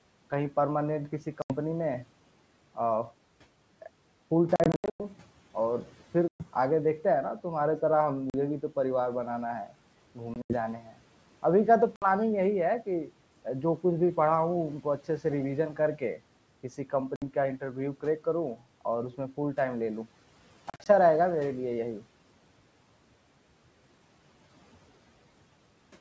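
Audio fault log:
1.42–1.53, 4.56–5.01, 6.28–6.47, 8.30–8.35, 10.34–10.55, 11.96–12.10, 17.16–17.23 and 20.70–20.87 s: packet loss on an ADPCM call. Lost packets became silence, 40 to 280 ms per event, and the 4.56 s and 20.70 s events are scattered gaps. Each loss leaves the decoder's predictor and step size out of step with the sender, so the sound returns after each hard-edged hole with a click, some distortion or a wrong level before settling.
10.78–10.96 s: speech cut by the noise suppressor. The suppressor mistook part of the speech for background and pulled it down with the noise, by about 11 dB at its deepest, so that stretch sounds swallowed and faint just after a packet-loss gap.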